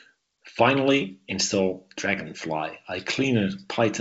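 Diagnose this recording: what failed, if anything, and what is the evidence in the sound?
Nothing in the speech points to a failure at any stage: the audio carries the band-limited character of G.722 wideband telephone coding, with content stopping at about 7.7 kHz and any coding trace faint at most, which fits the codec's full 64 kbit/s mode.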